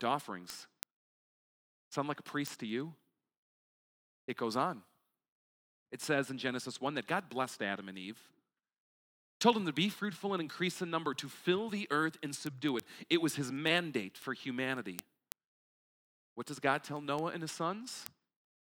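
Word clock ticks run from 0.17 s to 18.61 s, a steady train of sharp clicks roughly every tenth of a second, well over a hundred in all. The speech crosses a digital link into a device running on its own clock rather than locked to the sender's, and the two clocks drift apart by something like a couple of hundred parts per million. Each time they slip past each other, a single sample is dropped or repeated, producing a tick of uneven strength.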